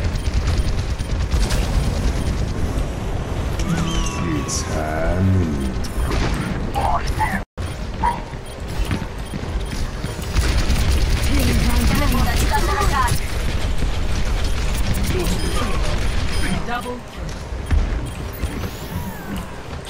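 No technical faults can be heard anywhere in this audio. Nothing in it calls for a timestamp or a correction.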